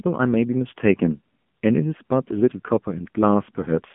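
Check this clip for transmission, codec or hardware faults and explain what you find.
One fault runs through the whole recording: AMR narrowband mobile codec coding. The speech is squeezed into a telephone band of roughly 150 Hz to 3.4 kHz, with nothing above 3.5 kHz. The codec rebuilds each 20 ms frame from a vocal-tract model driven by sparse pulses, so at this low rate, which fits the 7.4 kbps mode, the voice sounds plainly buzzy and synthetic. That artificial texture distinguishes it from a simple band-limiting filter, which would sound muffled but natural.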